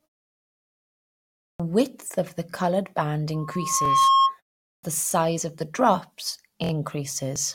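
At 1.41 s, after a pause of about 1.4 s, the output device has gone idle and is slow to wake, giving a clipped start after a pause. The first 0.19 s of speech is swallowed, so the sound bursts abruptly out of silence just before "of the", its opening missing.

From 2.51 to 2.53 s, just after "of the", fresh audio fails to reach the device in time, and it replays its last block of about 23 ms, which fits a 1024-sample buffer. This repeated buffer plays once more than it should, giving a tiny stutter with a hard seam at the join.

From 3.34 to 4.38 s the microphone is hearing its own loudspeaker, and at 1.1 kHz the loop gain tops one. This loudspeaker feedback squeal grows by itself over roughly 0.7 s into a piercing steady tone about 10 dB above the speech before it stops. Inside the squeal, at 3.85 to 3.88 s, another 23 ms block repeats once, adding a brief hitch to the ringing.

At 4.66 s, after a shorter pause of about 0.33 s, the device again needs time to resume, and the next onset loses 0.17 s, so the sound starts cut off.

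The same underrun recurs from 5.11 to 5.13 s, a single 23 ms repeat heard as a small click-like stutter. The worst is from 6.64 to 6.71 s, right after "of the drops", where the 23 ms buffer plays three extra times back to back. The result is a short buzzy judder of hard-edged repeats.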